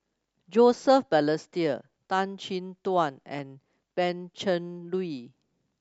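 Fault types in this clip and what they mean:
DAB burbling: residual reception bit errors corrupt MP2 sub-band samples and scale factors, causing brief noise blips over the speech at 3.39 s and 5.16–5.26 s.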